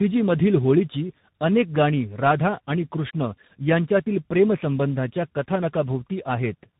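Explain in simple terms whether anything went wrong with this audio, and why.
Yes, something went wrong, and it lasts the whole clip. The speech suffers from tandem speech coding. It passed through two speech coders in a row, each squeezing the already damaged result again. So it sounds rough, muffled and warbly. Nothing above 3.8 kHz survives.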